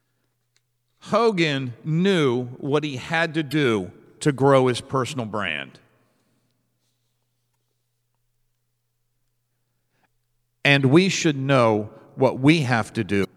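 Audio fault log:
1.27–1.30 s, 3.51–3.53 s, 7.51–7.54 s, 10.78–10.80 s and 13.21–13.25 s, damaged data in a compressed stream: corrupted bytes in the encoded speech make the decoder misread frames, lose sync and hunt for the next valid header. Each event is a brief chirp or squawk of roughly 20 to 50 ms: just before "knew what he had", right after "what he had to", at 7.51 s, just before "we should know", and near the end.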